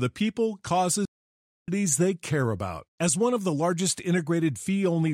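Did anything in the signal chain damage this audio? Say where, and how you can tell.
Yes, at the playback stage. The speech halts mid-flow at 1.05 s and stays silent for about 0.62 s until 1.68 s, resuming on "they care about". This is a playback stall, likely caused by the player's buffer running dry. The abrupt stop mid-flow is what sets it apart from a natural pause.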